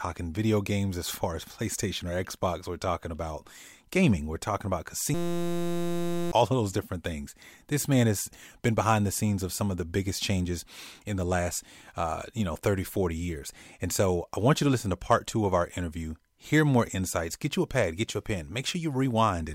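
A speech clip with a system hang loop from 5.14 s to 6.32 s. The audio freezes into a steady 172 Hz buzz as the hardware keeps replaying one 5.8 ms slice of its ring buffer, which fits a 256-sample buffer, while the stalled system stops feeding new sound. Roughly a second of speech is lost. The waveform shows one short cycle repeated exactly, and the spectrogram shows flat horizontal harmonic lines spaced 172 Hz apart.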